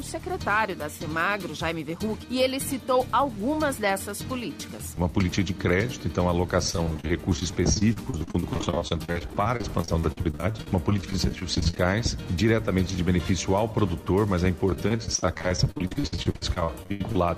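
From 6.70 to 11.85 s, and again from 14.70 to 17.19 s, the audio breaks up with repeated packet loss (robotic sound). Dozens of short holes, the longest about 47 ms in the first stretch and 79 ms in the second, are each patched by extending the preceding sound. Patching covers roughly a quarter and then a third of these spans. Unlike a single dropout or silent gaps, the holes come in rapid succession and are filled rather than muted, which gives a choppy texture with pieces missing.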